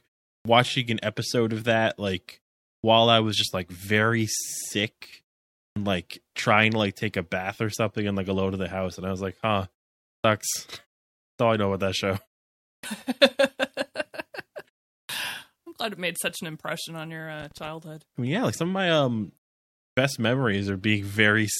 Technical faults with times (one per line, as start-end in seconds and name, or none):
0.36-0.45 clipped start after a pause
2.75-2.84 clipped start after a pause
5.68-5.76 clipped start after a pause
10.15-10.24 clipped start after a pause
11.30-11.39 clipped start after a pause
12.75-12.83 clipped start after a pause
15.01-15.09 clipped start after a pause
17.40-17.69 loose connector crackle
19.88-19.97 clipped start after a pause